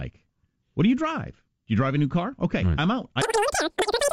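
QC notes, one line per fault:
3.22–4.12 s, wrong sample rate: after "right I'm out", speech runs three times fast and about 19 semitones high, which fits 16 kHz audio played at 48 kHz.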